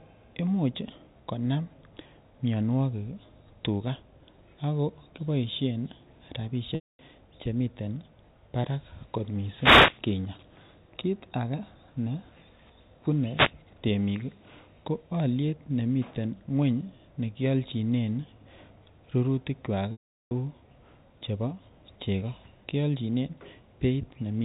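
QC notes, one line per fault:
6.75–6.99 s and 19.92–20.31 s, packet loss with pitch repetition: roughly 240 ms and 390 ms of packets went missing. The receiver repeated the last pitch period and faded it out, so each gap becomes a brief held buzz that sinks into silence before speech cross-fades back.
9.55–10.00 s and 13.33–13.52 s, wireless microphone noise hit: the FM radio link faded as reflections cancelled, letting receiver noise swell into a short swish of static over the speech.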